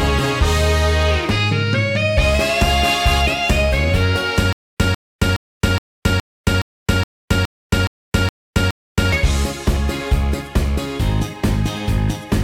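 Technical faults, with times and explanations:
4.53 to 9.12 s, stutter with silent gaps: a short fragment of about 147 ms plays, followed by about 271 ms of silence, and the pair repeats 11 times at an even 418 ms period. The likely cause is a stalled player or stream that replayed its last buffered fragment on each retry and then ran dry. The steady rhythm comes from the fixed retry interval. The audio that should have filled this span is missing.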